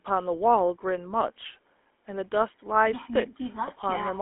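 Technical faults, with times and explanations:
Throughout, GSM full-rate codec: the speech has that buzzy, gravelly roughness of the old full-rate coder, which fits a 13 kbps stream. The excitation is rebuilt from sparse regular pulses, and the line only spans about 250 Hz to 3.5 kHz.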